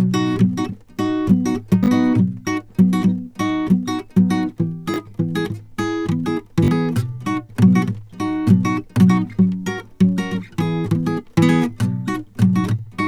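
Three repeated-buffer stutters hit this music, at 1.84–1.88 s, 4.94–4.96 s and 6.64–6.68 s. Each time, fresh audio didn't show up in time, so playback looped the last chunk, which sounds like a 20 ms buffer. The first and third repeat it twice more, the middle one just once, with a hard seam at every repeat. So you hear quick buzzy stutters, and a few tens of milliseconds of music get skipped at each.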